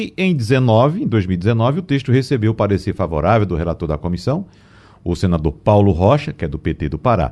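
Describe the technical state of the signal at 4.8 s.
At 4.8 s the speech signal is intact, with no fault present at that moment.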